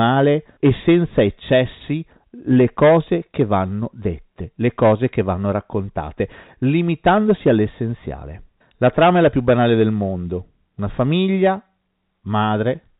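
Nothing stood out on listening to this speech beyond the narrow band expected of G.711 telephone coding.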